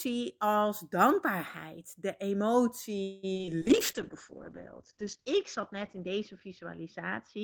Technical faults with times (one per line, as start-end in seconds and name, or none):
3.03-3.49 repeated packet loss (robotic sound)
3.63-7.44 call bitrate drop